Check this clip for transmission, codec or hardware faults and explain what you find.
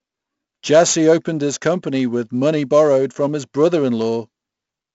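One codec fault runs through the whole recording: 4-bit ADPCM compression. The encoder stored each sample as a coarse 4-bit step from a predicted value and kept resizing that step. The result fits roughly 64 kbps, or 16,000 samples a second at 4 bits each, and nothing survives above 7.7 kHz. The quantisation error rides on the speech as a heavy gritty hiss that swells with loud syllables, with crunchy distortion on sharp onsets and a dulled top end.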